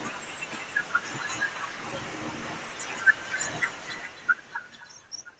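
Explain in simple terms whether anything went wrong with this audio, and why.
Yes, something went wrong: there is echo with no canceller from start to finish. The other end's loudspeaker fed the speech back into its microphone, so every phrase returns about a third of a second later as a quieter, hollow copy.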